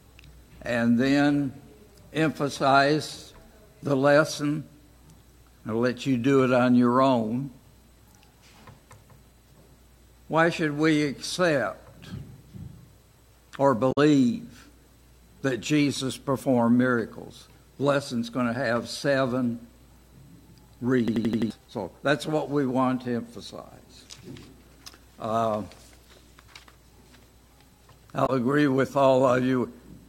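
A short glitch at 13.89 to 13.98 s and again at 28.23 to 28.30 s is damaged data in a compressed stream: the decoder lost frame sync and searched for the next header. From 21.08 to 21.50 s an 85 ms slice repeats five times as a stutter at 11.7 Hz, which fits a 4096-sample buffer. This is a system hang loop, where the hardware kept cycling that buffer while the system froze, losing about 0.4 s of sound.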